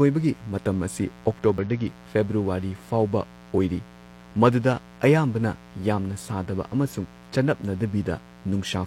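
A speech recording carries a steady, raspy mains buzz at 60 Hz throughout, about 25 dB below the voice. Its sharp, harmonic-rich edge sets it apart from a smooth hum. At 1.58 s a brief glitch marks damaged data in the compressed stream, where the decoder lost sync.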